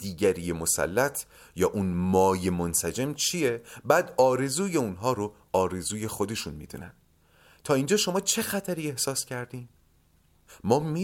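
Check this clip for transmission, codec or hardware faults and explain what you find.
Nothing stood out on listening to this speech recording.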